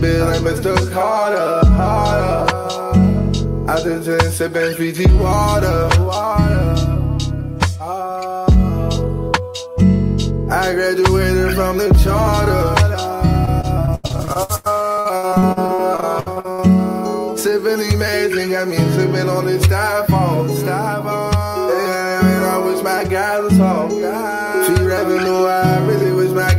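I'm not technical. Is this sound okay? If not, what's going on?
No. From 13.45 to 16.60 s there is repeated packet loss (robotic sound). Pieces of audio kept going missing, and each hole was patched by stretching the last sound, so it turns choppy with pieces missing. Unlike one single dropout, the holes come rapid-fire, each lasting at most about 0.1 s.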